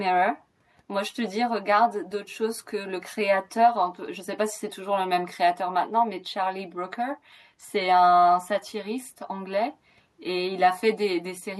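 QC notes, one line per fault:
Nothing to flag; the speech clip passes QC with no faults found.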